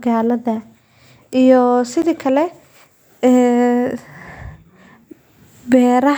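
At 2.02 s a block of digital silence cuts the speech for 10.7 ms, which fits a 512-sample buffer. Its brevity makes it a tick or dip, not audible silence.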